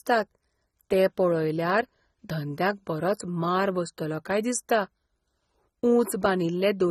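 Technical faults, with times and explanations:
Throughout, AAC compression: the speech sounds dull and smeared, with a fizzy, warbling edge on sibilants. Nothing is heard above 14.1 kHz. This likely comes from AAC-LC at a low bitrate, around 24 kbps, which starves the upper bands and blurs detail.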